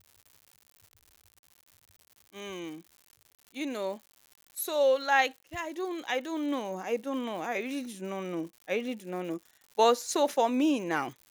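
An unreliable data bit runs throughout the speech: one marginal data line flips at random, adding equal spikes of about -39 dBFS, heard as steady crackle continuing through pauses.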